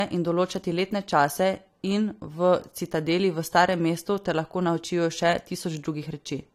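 Speech, with one fault running through the whole clip. The audio stops dead at about 16.6 kHz, with nothing present above that. The sound fits low-bitrate audio saved at a high bitrate. The likely cause is an AAC encode at around 55 kbit/s that was later re-encoded as MP3 at about 256 kbit/s. The second, richer encode adds almost nothing. It cannot restore the detail that the first pass removed.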